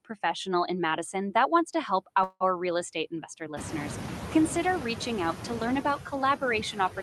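From start to finish the speech carries noise suppressor artifacts: the background is pulled down by about 5 dB wherever the suppressor decides it's steady noise, so the floor dips in the pauses and creeps back up under the talking. The room noise jumps at roughly 3.5 s, ending up about 11 dB below the speech.

At 2.23 s, right after "that wants to help", there's a call audio freeze lasting until 2.43 s, before "real estate investor listeners". It sounds like the last bit of sound being stretched out for about 170 ms as a fading buzz, then roughly 40 ms of silence. The likely cause is packets arriving late and the jitter buffer running dry. Nothing gets lost; the speech just resumes about 170 ms later than it should.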